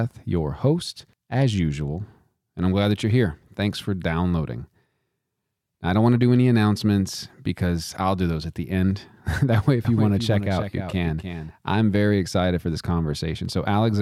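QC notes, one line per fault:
9.85–11.51 s, doubled audio track: a second, quieter copy of the speech, roughly 10 dB down, runs about a third of a second behind the original, full-band and dry, starting and stopping abruptly. This points to a likely second capture path or misaligned duplicate edit.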